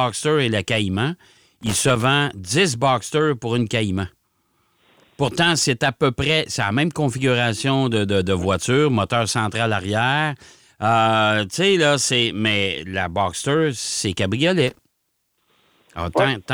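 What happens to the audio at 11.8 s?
Nothing goes wrong at 11.8 s; the speech carries on intact through that moment with no dropout, click or distortion.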